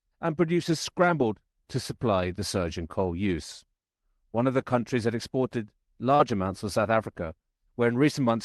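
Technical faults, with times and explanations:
6.15–6.22 s, short concealed packet loss: about 40 ms of speech after "the countries that exported" never reached the decoder in time. The receiver extended the preceding sound to fill the gap, then blended back into real audio before "amounts for", leaving a brief smear.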